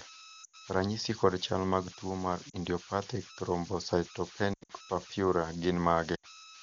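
Converter idle tones run through the whole speech clip. An undithered delta-sigma converter settles into repeating bit patterns on small input, leaving a whistle around 1.5 kHz in the pauses and grainy noise beneath quiet passages, only about 15 dB below the speech.

Lost AMR speech frames strike at 0.43 to 0.56 s, 2.49 to 2.56 s, 4.53 to 4.72 s and 6.15 to 6.26 s, over the wideband coding. Corrupted frames were concealed by reusing the last good pitch and vocal tract settings at falling gain. About 100 ms, 40 ms, 140 ms and 80 ms of speech are lost. The third gap is scattered over 160 ms with runs up to 80 ms. Each gap drops the voice to near silence within two frames, followed by a weak, rough onset.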